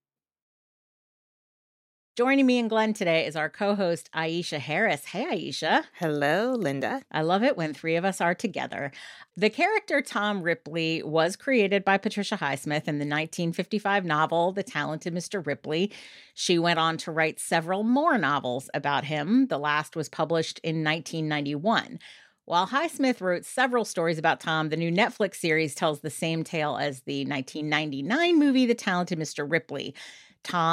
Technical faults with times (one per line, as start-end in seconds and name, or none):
none